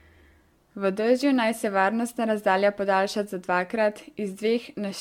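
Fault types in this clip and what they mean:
Generation loss: the speech has the swirly, hollow smearing of repeated lossy coding, likely from about five AAC-LC passes at around 96 kbit/s, each re-quantising on a shifted frame grid. Artefacts compound, consonant attacks blur, and nothing remains above 17 kHz.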